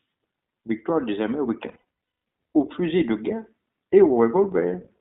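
iLBC codec coding runs through the whole speech clip. It codes each 20 ms frame independently, and the sound is confined to a band of roughly 200 Hz to 3.7 kHz, consistent with iLBC's 15.2 kbps mode. The damage is plainly audible as a dull, slightly rough, synthetic quality.

Lost iLBC frames occur from 1.68 to 1.81 s. The decoder filled the missing packets by repeating the last pitch cycle blended with noise, producing a held, buzzy, breathy vowel-like sound. The longest dropout is around a fifth of a second, and clarity returns almost immediately afterwards.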